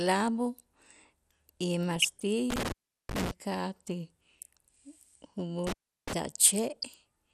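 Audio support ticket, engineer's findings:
Dull, band-limited speech with granular, gurgling texture throughout. Likely MP2 compression: Layer II sub-band coder starved of bits, upper sub-bands switched off and flickering, remaining bands coarsely quantised. Plainly audible damage, consistent with a low rate around 80 kbps.

DAB burbling at 1.96–2.22 s and 6.76–6.84 s. Short noise blips and level jumps in single sub-bands. Reception-side bit errors slipping past error correction into the MP2 stream, corrupting samples and scale factors so single sub-bands jump in level frame by frame. Roughly 0.3–0.4 % bit error rate, brief bursts.

Intermittent contact at 2.50–3.31 s (line open about 375 ms) and 5.67–6.13 s (open about 352 ms). Audio drops out with crackle at the break and remake edges, faint residual hiss during the gap. Loose plug or cable briefly opening the signal path.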